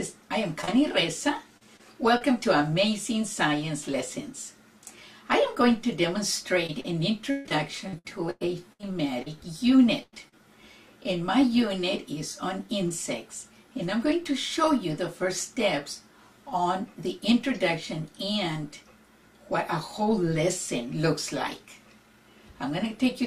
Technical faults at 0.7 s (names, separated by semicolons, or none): short concealed packet loss